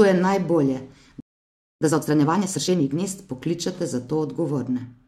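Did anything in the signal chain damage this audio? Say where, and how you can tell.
Yes. At playback, the speech drops to silence from 1.20 to 1.81 s, 0.61 s, then resumes: a playback stall, likely from the player starving for data or being blocked.

From 1.81 to 3.03 s, starting with "pokličete za", the speech runs hurried at 1.5x with unchanged pitch. This is time-compressed catch-up: the player is cutting and cross-fading fragments to clear its backlog.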